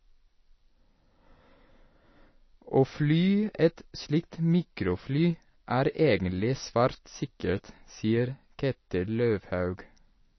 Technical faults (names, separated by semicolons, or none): MP3 compression